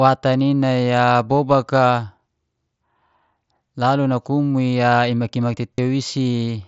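A speech recording carried over a Bluetooth headset link suffers concealed Bluetooth headset packet loss from 5.76 to 5.78 s. About 30 ms of audio never reached the phone, which fits a short run of roughly four dropped packets. The receiver filled the gap by repeating the best-matching stretch of the preceding waveform, so that instant becomes a brief buzzy, steady tone at full level with a slight warble as the real signal resumes, heard against the wideband mSBC codec's light graininess.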